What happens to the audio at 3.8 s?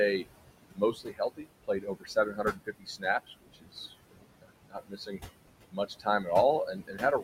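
At 3.8 s you're near the end of a stretch, from 3.27 s to 3.92 s, where the noise suppressor cut speech along with the background. It misjudged part of the speech as steady noise and pulled those bands down with the room sound, by about 21 dB at the deepest point. Around 0.4 s of that span is affected, so the softer parts sound swallowed and faint instead of cleanly spoken.

The noise suppressor artifacts are there too, as they are through the whole clip. The suppressor is turning down what it takes for steady noise by about 20 dB, frame by frame, so the room noise, which sits about 10 dB under the speech, dips in the gaps and climbs back under the talking.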